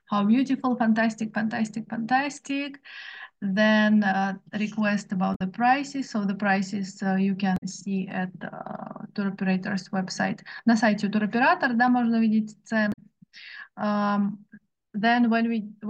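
At 5.32 s the audio breaks for about 90 ms, until 5.41 s. This is damaged data in a compressed stream. Bytes in the encoded file were lost, zeroed, overwritten or mixed with other data. The decoder misreads or rejects those frames, loses sync and hunts for the next valid frame header. The same fault returns from 7.54 to 7.63 s and again from 12.89 to 12.99 s. Each time the sound is broken by a short burst of wrong audio or a brief gap.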